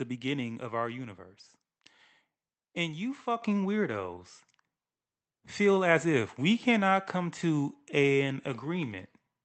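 At 3.42 s the microphone volume stepped up. Automatic gain control judged the input too quiet and raised the device's input level in a single jump of about 7 dB. Voice and room noise get louder together at that instant. At 4.44 s a second step adds about 1 dB. Underneath, the call path's Opus coding limits the band to about 8 kHz, which points to a modest bitrate of around 24 kbps.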